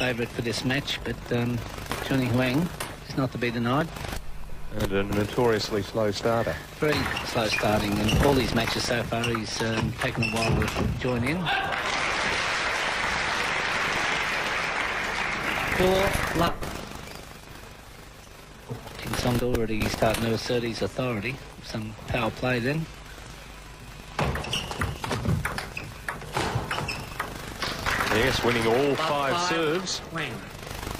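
At 3.81–3.84 s, 19.80–19.84 s and 27.76–27.79 s, an overlap between stream segments trims roughly 35 ms of real audio at 4-second segment joins, producing a click or tiny skip. The waveform shows an abrupt step; the spectrogram, a thin vertical broadband line.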